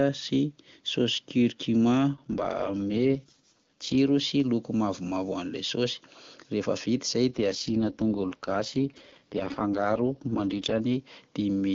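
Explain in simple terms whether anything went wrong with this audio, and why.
Two stretches of this speech, from 2.14 to 3.96 s and from 7.3 to 10.81 s, turn rough and synthetic-sounding: an AMR rate drop. The phone network briefly switched the voice codec to a much lower-quality mode, and the sound returns to clear once it switches back.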